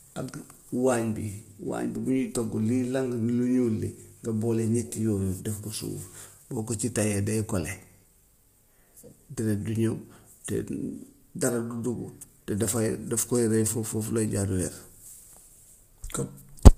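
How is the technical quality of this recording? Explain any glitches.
The speech is plainly degraded by low-delay AAC compression across the whole clip. Throughout, voices sound rough and grainy, with noise between harmonics and nothing above 15.6 kHz, likely from AAC-ELD coding at about 32 kbps.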